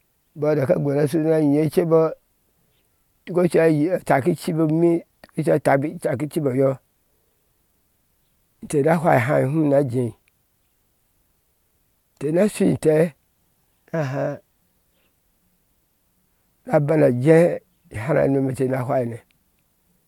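No audible technical faults.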